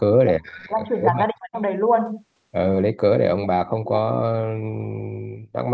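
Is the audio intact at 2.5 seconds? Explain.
Yes, the speech at 2.5 seconds is intact, with no dropout, click, distortion or other fault at that point, only the normal shaping of call microphone processing.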